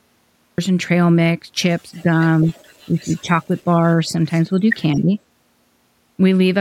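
This speech clip has a cut-off start: capture began late, so the audio jumps out of digital silence mid-sound at 0.58 s, with no natural onset before it. An echo leak follows, likely from a far-end loudspeaker whose echo canceller let some of its own playback back into the microphone. A very faint copy of the speech trails 216 ms behind, in a brief scrap at 1.97 to 2.02 s and again from 2.46 to 2.8 s. Speech suppressed in double talk also appears, likely because the canceller mistook overlapping talk for echo and turned everything down. The speech dips by a few decibels at 2.02 to 2.07 s and 2.44 to 2.5 s. It drops by about 10 dB across 2.89 to 3.66 s and again at 4.96 to 5.12 s.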